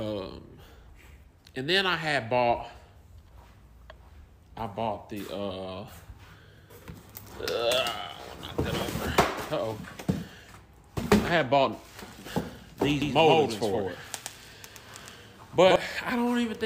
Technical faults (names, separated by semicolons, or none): doubled audio track